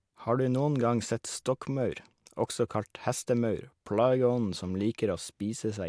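Nothing technically wrong stood out on listening to this speech recording.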